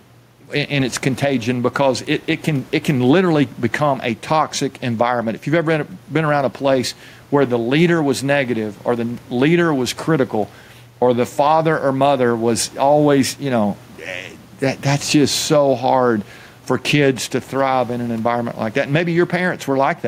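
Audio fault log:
Throughout, gain pumping: the room noise sits about 34 dB below the speech, and the gain swings by roughly 5 dB. Loud and quiet passages sit closer together than they should, giving a flattened, squeezed quality. This likely comes from input gain set too high for the microphone, with a fast limiter or compressor clamping down on each loud moment and releasing in the gaps.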